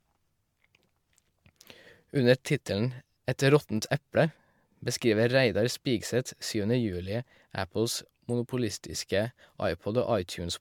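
From start to finish the speech has a swirly, hollow quality, with consonant attacks smeared and a watery shimmer in the upper range, and nothing above about 19.9 kHz. The likely cause is generation loss: around seven successive MP3 encodes, each re-quantising on a shifted frame grid so noise and spectral holes pile up. A single encode at the rate this suggests, near 145 kbit/s, would sound far cleaner, which separates it from plain low-bitrate compression.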